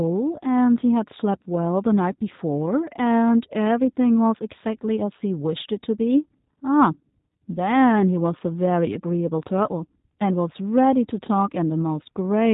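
Throughout, the G.729 codec rebuilds the speech from a vocal tract model and sparse pulses, which fits an 8 kbit/s stream. Nothing above 3.8 kHz survives, leaving it plainly rough and synthetic.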